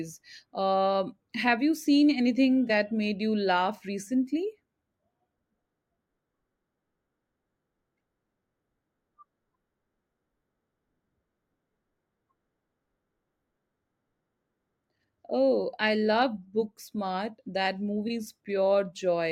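At 2.67 s, just before "made you laugh", and at 18.07 s, a corrupt frame was concealed. The decoder masked the damaged blocks, which lasted about 36 ms and 28 ms.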